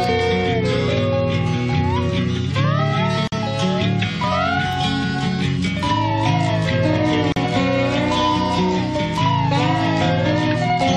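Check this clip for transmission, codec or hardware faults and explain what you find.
There are two faults, both of the same kind.

Gap at a join of encoded pieces, at 3.27 to 3.32 s (about 49 ms) and 7.32 to 7.36 s (about 40 ms), four seconds apart. Separately encoded segments were butted together with their encoder start delay and final-frame padding left in. The result is a brief dropout with smeared edges, after which the sound resumes where it stopped.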